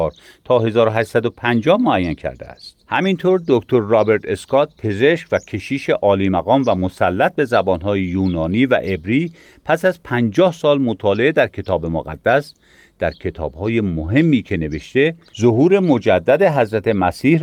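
No technical faults occur at any point in the speech.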